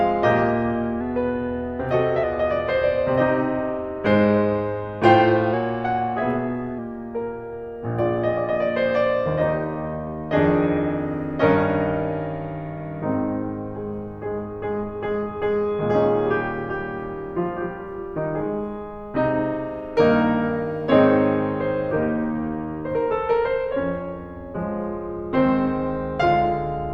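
From 1.01 to 2.24 s and 5.54 to 6.78 s, the music runs 5.9% fast, 99 cents sharp, then snaps back: likely a drift correction step.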